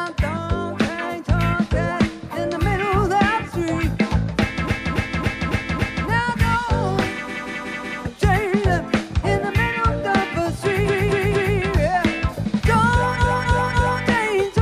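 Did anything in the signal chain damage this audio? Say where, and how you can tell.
Yes. Repeated frames at 4.67–6.06 s, 7.27–8.01 s, 10.85–11.54 s and 13.17–14.00 s, introduced at the codec or storage stage. Each passage is a short block replayed as a stutter: about 279 ms played five extra times, then 186 ms four extra times, 232 ms three extra times, and 279 ms three extra times. Those block lengths fit runs of a handful of compressed frames written or sent more than once, and each repeat lengthens the audio by its duration, about 0.7 to 1.4 s per event.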